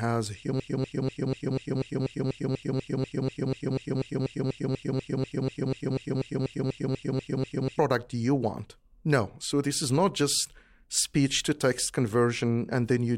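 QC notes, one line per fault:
0.60–7.79 s, broken-record loop: the speech locks onto a 0.24 s fragment that repeats exactly, back to back, 29 times, and what belonged in those seven seconds never plays. This is likely a stalled player or stream resending the last piece it held.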